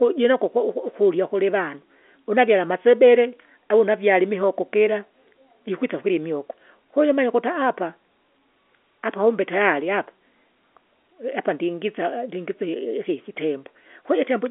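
There are no technical faults to describe in time order in this speech clip.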